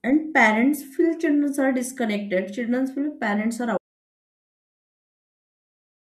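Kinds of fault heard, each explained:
Audio dropout to silence: the input was likely lost while zeros were still written, so after "children feel parents are" at 3.78 s the speech drops to dead silence until the end.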